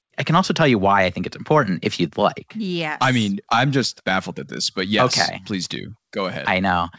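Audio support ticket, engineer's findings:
No faults found. Audio band-limited at 8 kHz.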